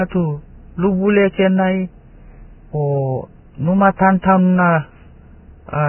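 Vorbis compression, likely at a bitrate near 10 kbps, runs throughout: nothing survives above 3 kHz, and coarse quantisation leaves the speech hissy and grainy.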